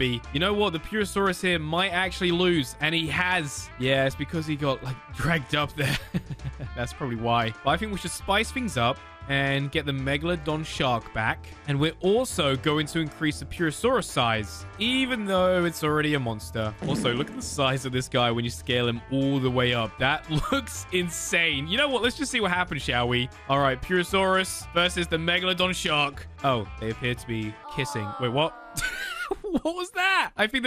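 Throughout the clip the sound is dull and gurgling, with a granular roughness, most likely from MP2 compression at a rate that points to around 80 kbps. Starved of bits, upper sub-bands switch off and flicker back, so a spectrogram shows a ragged, blocky top edge.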